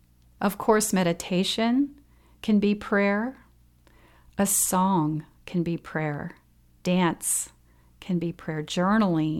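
Speech recording with no technical faults audible anywhere.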